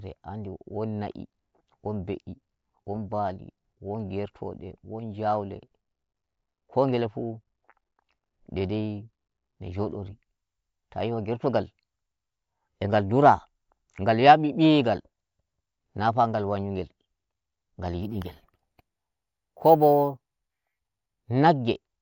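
From 18.03 s to 21.30 s the speech picks up imaging from sample-and-hold upsampling: a bright, metallic fizz riding on top of the voice and rising and falling with its level. Each sample was simply repeated to raise the rate, with no smoothing filter, which fits a 16 kHz source raised to 48 kHz. Mirrored copies of the spectrum result, the first filling roughly 8 kHz to 16 kHz at about -24 dB relative to the signal, its lowest component moving against the pitch.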